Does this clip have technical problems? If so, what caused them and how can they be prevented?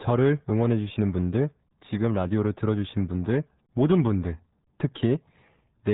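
Yes. RealAudio 14.4 codec damage runs throughout. Nothing passes above 3.9 kHz, and heavy coding leaves the speech muffled and gargly, consistent with an 8 kbit/s dial-up codec. Prevent this by recording from the original source or encoding with a modern wideband codec at a higher bitrate.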